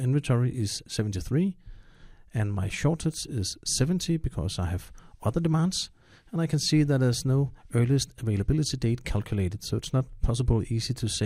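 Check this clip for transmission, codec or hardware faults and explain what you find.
Nothing in the clip points to a transmission, codec or hardware fault. The audio holds steady throughout, with no dropouts, glitches or level jumps to report.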